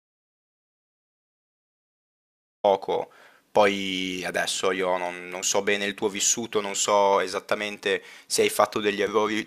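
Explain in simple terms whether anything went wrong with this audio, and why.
Yes: an audio dropout to silence fills the opening 2.64 seconds, likely a lost input. Unlike a natural pause, it's dead silence with no room hiss before speech cuts in.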